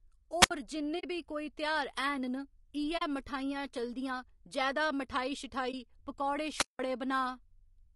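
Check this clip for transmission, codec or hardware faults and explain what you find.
There are three kinds of fault here: a constant codec texture plus two sorts of dropout, wireless squelch holes and soft frame-loss gaps.

The speech sounds rough and grainy all the way through, with noise filling in between the harmonics and a thin, synthetic top end. That's likely low-delay AAC compression, AAC-ELD. The damage is plainly audible, which fits a low bitrate of around 32 kbps.

There are two wireless microphone squelch dropouts, at 0.40–0.51 s and 6.52–6.80 s. In each one, hiss swells up, then the output goes nearly silent for about 66 ms the first time and about 178 ms the second, before the speech comes back. That's the FM signal fading until the receiver's squelch mutes it.

AAC frame loss with muting shows up at 0.99–1.04 s just before "बी कोई तेहार", at 2.97–3.02 s just before "मठाइयां चलदियां जैदा", and at 5.71–5.74 s. 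The first two holes are 40 ms and the last is 20 ms, which fits two, two and one lost frames. The decoder zeroed those frames, and the overlapping windows fade the sound out and back in, so the gaps are soft-edged.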